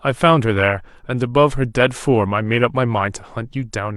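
No technical faults can be heard anywhere in the recording.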